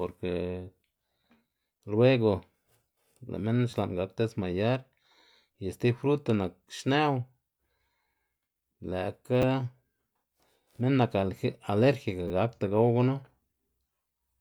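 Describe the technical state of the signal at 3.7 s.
There's a repeated buffer at 3.71 to 3.73 s, right before "xla'n gak desmayar". Fresh audio arrived late, so a 10 ms chunk replayed twice, giving a brief buzzy click.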